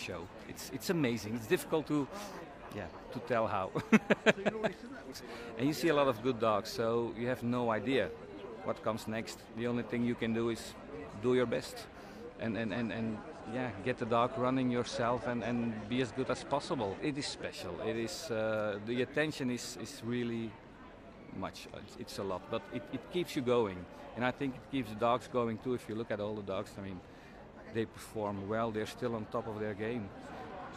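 Digital radio blending to analogue occurs from 12.26 s to 17.63 s. The receiver lost its digital stream and cross-faded, over about 194 ms, to the station's FM broadcast, then returned later. A faint hiss, roughly 45 dB below the programme, comes up, and the level shifts by about 1 dB at each blend.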